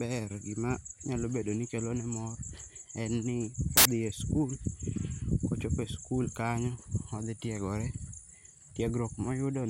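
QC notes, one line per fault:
3.77–3.85 s, samples built from the wrong bytes: after "en ni", misaligned byte assembly turns low bits into loud, harsh broadband noise for 80 ms, ending before "e sikul".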